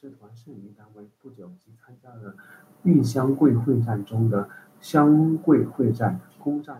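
No technical faults are audible.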